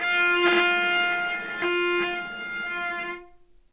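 At 1.62 to 1.64 s the audio jumps forward with no gap: a skip ahead, where roughly 0.7 s of audio was discarded, likely by an overflowing jitter buffer, and the two sides are spliced almost directly. From 1.72 s to the end, a jitter buffer speed-up runs the audio at 111% speed with unchanged pitch, as short pitch-period segments totalling about a fifth of a second are cut to drain the excess delay, giving a hurried feel. The narrowband call path, with nothing above 4 kHz, fits G.711 mu-law at 64 kbps.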